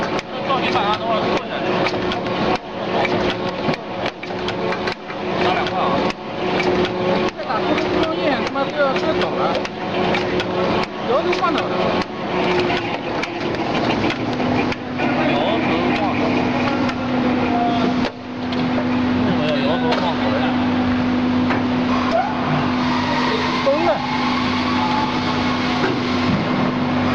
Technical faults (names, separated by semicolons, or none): none